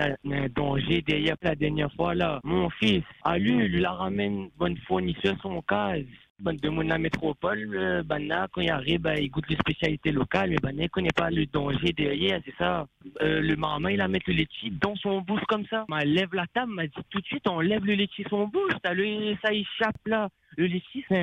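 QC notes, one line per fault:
0.00–14.86 s, overlap-add ripple: the level swells and dips by about 11 dB roughly a hundred times a second, giving a metallic buzz with extra tones around each note. The frames were rejoined with an overlap whose windows fail to sum to constant gain, so each frame boundary modulates loudness.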